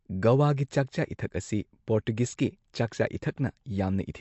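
A speech clip with MP3 compression damage throughout: nothing survives above about 7.9 kHz, and the weak, swirly, watery texture on sibilants points to a likely MP3 encode at a low bitrate, which fits roughly 48 kbps, zeroing quieter frequency lines.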